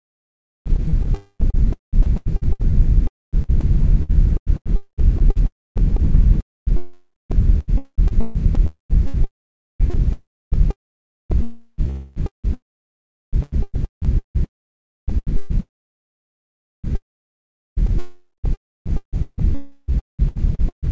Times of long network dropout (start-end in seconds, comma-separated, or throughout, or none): 3.07-3.35, 14.45-15.10, 19.55-19.90